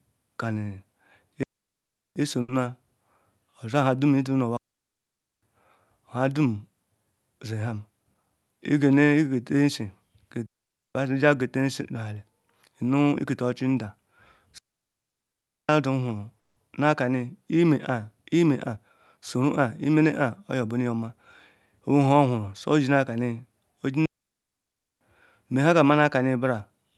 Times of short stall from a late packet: 2.41-2.50

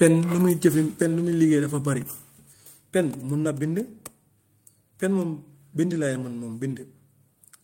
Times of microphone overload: 0.65-0.67

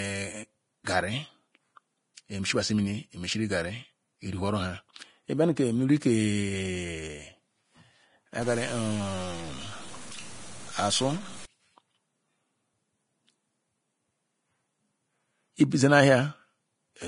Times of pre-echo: 0.84-0.87

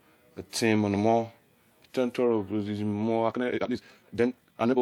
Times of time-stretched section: 3.26-4.81

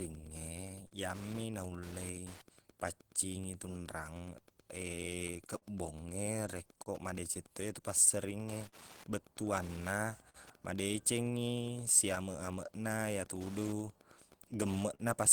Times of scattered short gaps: 0.87-10.37, 12.15-15.02

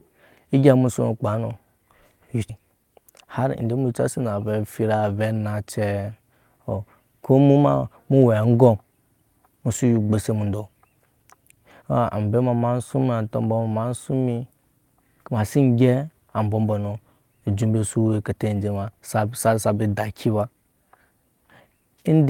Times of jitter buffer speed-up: 3.11-4.08

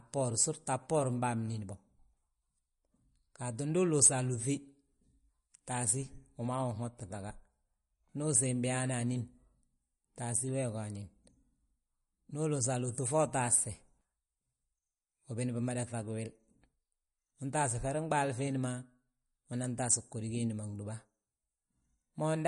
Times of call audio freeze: none

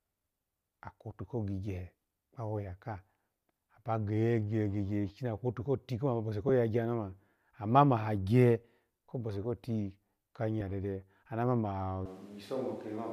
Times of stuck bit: none

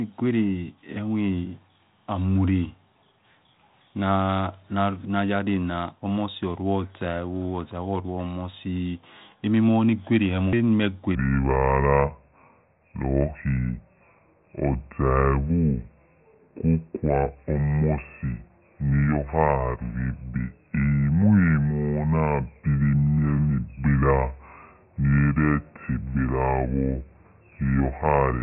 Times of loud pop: none

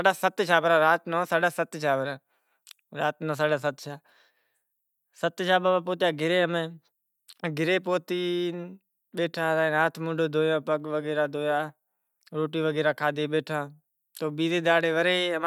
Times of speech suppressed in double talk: none

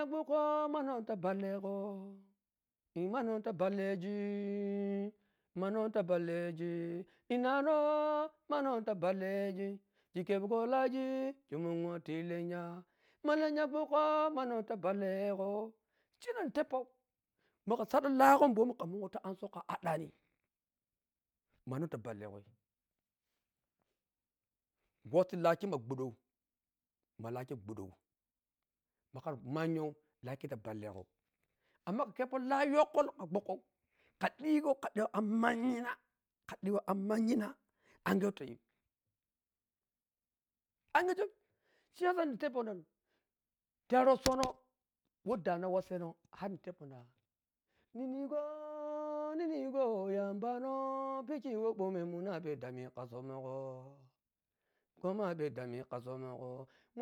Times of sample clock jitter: none

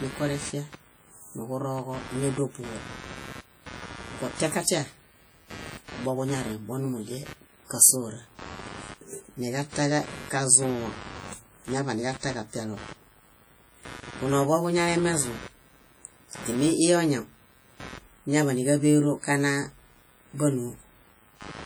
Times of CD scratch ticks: none

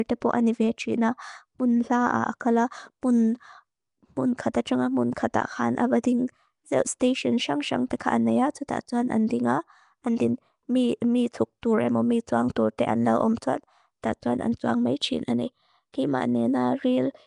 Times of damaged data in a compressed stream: none

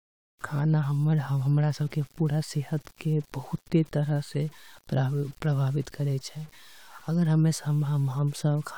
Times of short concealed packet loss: none

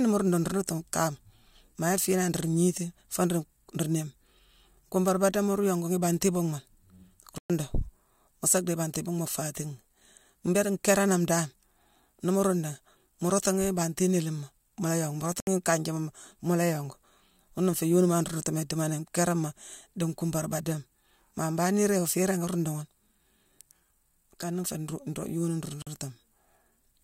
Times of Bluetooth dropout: 7.38-7.50, 15.40-15.47, 25.82-25.87

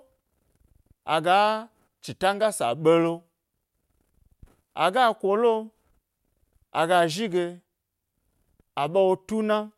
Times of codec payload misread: none

